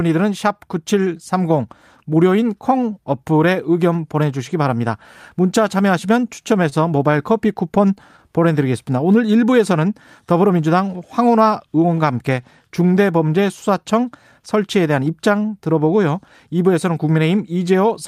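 At about 6.69 s there's a short stall from a late packet. The jitter buffer ran dry waiting for it, so the receiver held the last bit of sound for roughly 22 ms until the packet arrived, then picked up right where it left off. Nothing is lost, but that moment drags a touch with a faint buzzy hold, and everything after sits about 22 ms later.

Right after, from about 7.12 to 8.20 s, come scattered short gaps. About seven small holes from late or dropped packets pop up across that second or so, each patched by carrying the previous sound forward. The longest is around 15 ms and together they cover roughly 50 ms, about 5 percent of the stretch. It stays clear, but you'll catch little ticks and smeared hiccups dotted through it.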